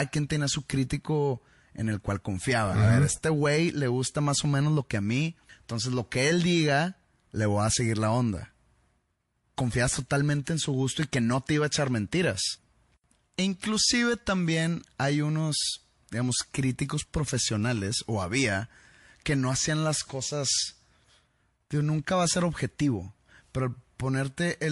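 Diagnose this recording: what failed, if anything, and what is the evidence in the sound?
Codec stage: MP3 compression, likely at a low bitrate around 48 kbps, leaves plainly audible watery, swirling artefacts and a dulled top end throughout the speech.

Codec stage: pre-echo from 10.44 to 10.47 s, just before "en su gusto y". Quantisation noise from the long block, never switched to short blocks, spreads 28 ms ahead of the attack, rising about 14 dB as hiss.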